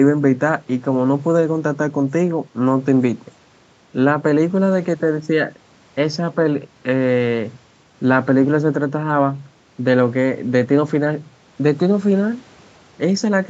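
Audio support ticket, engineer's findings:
No faults found; ordinary call-path band limit near 8 kHz.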